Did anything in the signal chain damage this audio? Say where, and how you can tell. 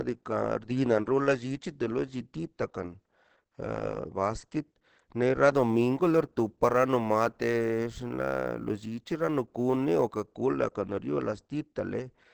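Yes. Opus compression, throughout the clip, at the codec stage. The speech is muffled and hoarse from start to finish. That points to an Opus encoder running in its SILK speech mode at wideband. This is likely caused by a low bitrate, around 16 kbps, where the codec models the voice coarsely instead of preserving its fine detail. The damage is plainly audible.

Sample clock jitter, from 5.54 s to 10.27 s, at the converter stage. It begins after "a basket nero" and clears before "kola kriola". Over that stretch a hiss-like roughness rides on the speech, growing on louder and brighter sounds and dropping away in pauses. The converter's clock was wandering by a few microseconds, so samples were taken slightly early or late. Steep parts of the waveform take the largest errors, leaving a noise floor roughly 35 dB below the signal.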